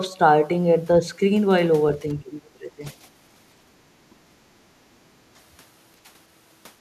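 A speech recording in which, from 2.14 to 2.85 s, the talker dips sharply, by something like 15 dB at worst, and parts of about half a second of it thin out or break up. This is likely speech suppressed in double talk: with both ends speaking, the echo canceller mistook the local voice for loudspeaker echo and turned it down. From 4.01 to 4.31 s the room sound drops by about 12 dB and then returns. This is background gated by the echo canceller, which clamped the microphone while the loudspeaker played and released it once playback stopped.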